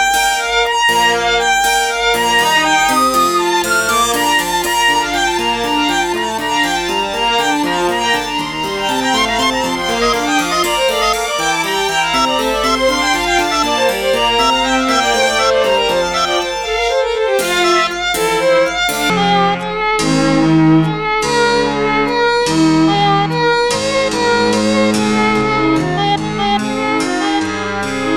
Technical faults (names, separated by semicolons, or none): section at the wrong speed